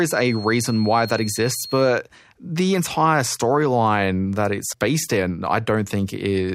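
A speech recording that opens with a feedback whistle: from 0.0 to 2.0 s a thin, steady tone at 4.3 kHz sits about 15 dB below the speech, swelling and fading slowly in level, and it is gone by the time the speaker reaches "the entire storyline that". The likely cause is a loudspeaker-to-microphone loop held right at the edge of feedback, so that a single frequency keeps ringing without building into a full howl.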